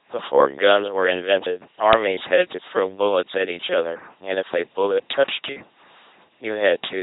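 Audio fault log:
throughout, LPC-10 vocoder: the speech comes out as a buzzing, mechanical robot voice with heavy codec damage. The sound fits a 2.4 kbit/s LPC-10 coder, which swaps the real voice source for a synthetic pulse train or noise fed through a short all-pole vocal tract filter. Each instant is forced fully voiced or fully unvoiced, so wrong decisions surface as stray buzz or hiss. Nothing remains above about 3.9 kHz, leaving the voice dull and band-limited.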